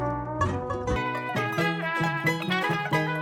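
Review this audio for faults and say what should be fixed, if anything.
From 0.96 s to the end, the music plays at double speed and an octave (12 semitones) higher: a wrong sample rate fault. The audio appears to have been recorded at 24 kHz and played at 48 kHz without conversion, so timing and pitch scale together. On a spectrogram, every partial jumps up an octave with wider harmonic spacing. On the waveform, note envelopes and cycles shrink to half their length. Resampling whenever the source rate differs from the playback rate prevents this.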